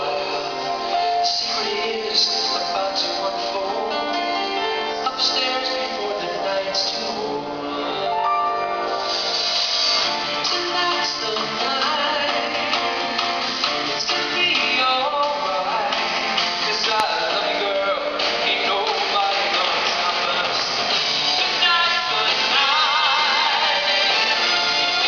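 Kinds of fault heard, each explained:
Loud pop: two sharp, single pops land on top of the sound, which carries on underneath. The first, at 17.0 s, is very loud, around 20 dB above the signal. The second, at 20.6 s, is around 10 dB above it. Each lasts about 20 ms and is likely caused by a sudden voltage step or pulse from a switch, plug, static or driver glitch. The waveform shows a tall, narrow spike, and the spectrogram shows a thin vertical stripe across all frequencies.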